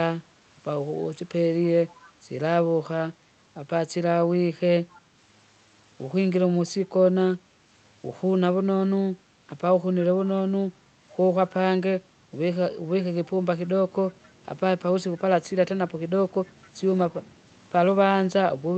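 An echo leak, likely from a far-end loudspeaker whose echo canceller let part of the returning signal through, appears twice in the speech: from 1.9 to 2.12 s and again from 4.94 to 5.01 s. Each time a faint, delayed copy of the voice, lagging by 265 ms and sitting far below the direct speech, surfaces as a brief scrap behind it, on top of the band-limited sound of the call codec.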